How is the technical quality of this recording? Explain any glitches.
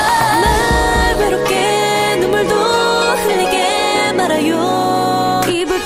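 Nothing stood out on listening; no glitches were apparent anywhere in the recording.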